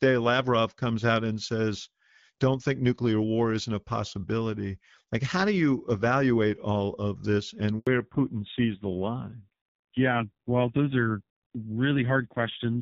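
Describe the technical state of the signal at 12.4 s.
At 12.4 s the signal is in a fallback to narrowband, running from 7.87 s to the end. The call has dropped out of HD Voice into a narrowband codec: nothing remains above 4 kHz, and the speech turns dull and raspy, consistent with a low AMR-NB rate near 5.9 kbit/s. Unlike a simple low-pass filter, the bandwidth change arrives abruptly mid-clip together with added coding roughness.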